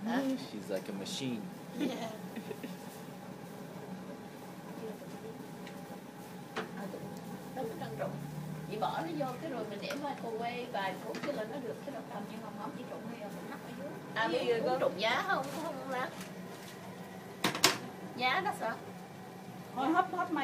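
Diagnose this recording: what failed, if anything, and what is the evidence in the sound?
Nothing failed in this recording, and there is no evidence of a fault anywhere in the sound.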